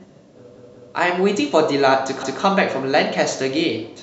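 At 0.56 to 0.93 s, a repeated buffer replays the same 186 ms stretch of speech twice, then once more at 2.23 to 2.42 s, because new audio arrived late. That length fits an 8192-sample buffer. Unlike an echo, each stutter is identical, undecayed and hard-joined.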